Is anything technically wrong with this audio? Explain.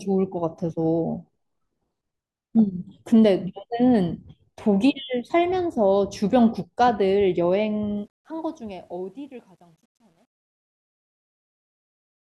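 Yes. From 7.97 s to the end at 12.38 s, the fade-out on this speech has truncation distortion. The gain stage applying the fade discards low-order bits without dither, with a resolution that fits roughly a 10-bit word length, so the falling signal is forced onto ever coarser steps. Starting around 8 s, the sound turns grainy, and from 9.3 s onward it becomes gritty.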